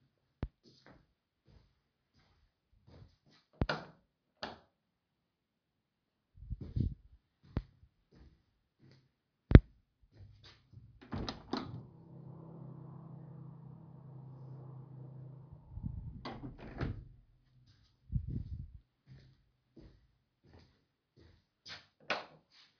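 No technical faults can be heard anywhere in the audio; the signal holds steady and intact throughout.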